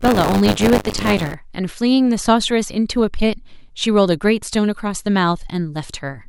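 Speech, with buffer tearing from the start to 1.34 s: a steady robotic buzz at 100 Hz, present only under the voice. Writer and reader cross inside each 10 ms period, so a small slice of every buffer replays audio roughly 30 ms old, with hard joins on both sides.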